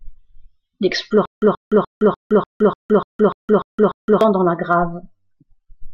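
A speech recording that locks up from 1.25 s to 4.21 s in a stutter with silent gaps: the same 129 ms burst of sound repeats ten times, each followed by 166 ms of dead digital silence, so it returns at a steady 296 ms beat. The likely cause is a playback or stream stall, where every retry replayed the last buffered fragment and then ran dry, and the speech that belonged in that stretch is gone.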